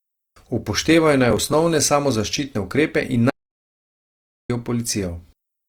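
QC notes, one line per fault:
throughout: Opus compression, plainly audible across the speech. This is likely a 24 kbps Opus encode in its music (CELT) mode at full bandwidth, reaching up to about 20.2 kHz. Starved bands are refilled rather than left empty, so the voice turns grainy and rough instead of swirling with the watery holes MP3 leaves.
1.31–1.53 s: processor overload crackle, just before "samozaščitne ukrepe in". Buffers of roughly 5 ms are missed several times in a row and skipped outright, each leaving a hard-edged gap. The result is a short gritty tear riding on the speech, not a clean break to silence.
3.30–4.50 s: audio dropout to silence, right after "samozaščitne ukrepe in". About 1.2 s of sound vanishes into silence with no room tone at all, likely from the input being lost while recording continued. Unlike the crackle, the signal is simply absent, then returns mid-flow.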